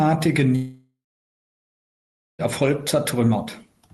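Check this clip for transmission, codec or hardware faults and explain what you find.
One transmission fault is present, a long network dropout, heard through what sounds like an Opus call path with audio limited to about 12 kHz.

From 0.55 to 2.42 s the sound stops. The last sound is stretched into a fading buzz or hiss, then about 1.4 s of near-silence follows. Audio resumes with roughly 1.8 s missing. This is likely a stall in packet delivery, with the receiver concealing the gap until it gives up.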